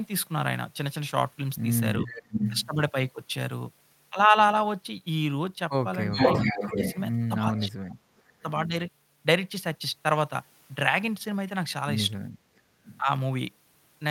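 A delayed copy of the speech returns from 2.01 to 2.69 s, about 0.39 s late and roughly as loud as the original, and again from 6.12 to 7.01 s at about 0.41 s. Each time it is an echo leak, likely from a loudspeaker whose echo canceller let its microphone pickup through. Fainter repeats follow from 7.9 to 8.42 s, well below the speech at about 0.41 s, and from 12.56 to 13.05 s, around 20 dB down at about 0.43 s.

Overlapping these, the speech itself dips: by about 15 dB from 2.02 to 2.13 s, by around 10 dB from 6.45 to 6.78 s, and by roughly 35 dB between 7.38 and 8.39 s. This is speech suppressed in double talk, likely because the canceller could not separate the talker from the echo and turned both down.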